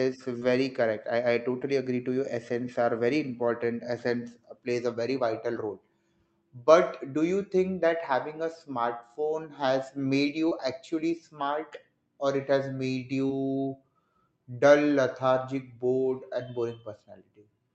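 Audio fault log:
0.39–0.43 s, 10.49–10.53 s (just before "actually smart"), 13.27–13.31 s: short concealed packet loss. About 20 ms missed the decoder each time; the gap was filled by extending the preceding sound, heard as a brief smear or wobble.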